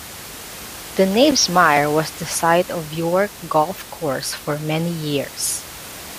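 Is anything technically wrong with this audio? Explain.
No, nothing is technically wrong with this speech recording. Room noise can be heard sitting about 16 dB below the speech, which is simply part of the space where the microphone was and not a fault of the system.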